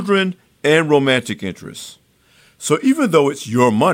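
No technical faults are audible.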